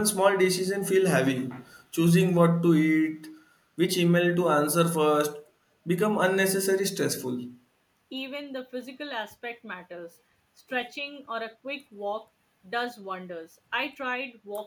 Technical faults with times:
1.62-1.85 echo leak

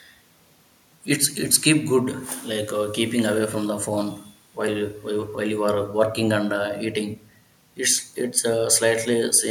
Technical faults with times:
none

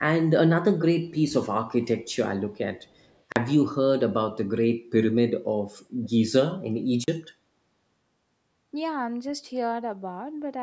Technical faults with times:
2.81-3.20 echo leak
3.32-3.36 block of digital silence
6.03-6.09 echo leak
7.04-7.08 block of digital silence

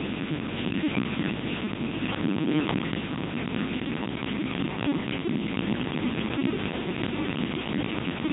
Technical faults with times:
0.00-8.32 Codec 2 vocoder

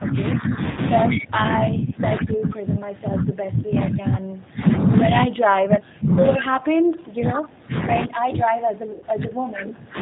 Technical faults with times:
0.00-10.01 G.729 codec
0.00-0.60 speech suppressed in double talk
0.71-0.80 VoIP packet loss concealed by the speech codec
1.11-1.17 echo leak
8.05-9.97 speech suppressed in double talk
8.92-9.04 VoIP packet loss concealed by the speech codec

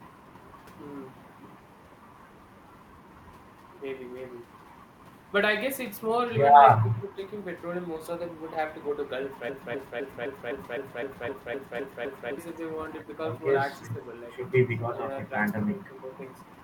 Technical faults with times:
6.77-7.19 speech suppressed in double talk
9.49-12.38 broken-record loop
13.79-14.01 speech suppressed in double talk
14.69-15.11 speech suppressed in double talk
15.72-16.10 speech suppressed in double talk

